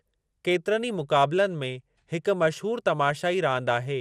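Speech runs through the whole clip with a dull, band-limited tone. The upper range drops in and out, and the remaining content carries a gurgling, granular roughness. This damage is plainly audible and is likely MP2 compression at a low rate, around 80 kbps. At that rate MPEG Layer II cannot fund all 32 of its sub-bands, so the upper ones are switched off and flicker between frames. Those still coded are quantised coarsely enough to produce the grainy texture. At 3.67 s there is a brief DAB burbling event. It is consistent with a frame or two of corrupted audio data. Bit errors at a low rate, on the order of a tenth of a percent, slipped past error correction and corrupted the audio data, putting short blips of noise into individual sub-bands.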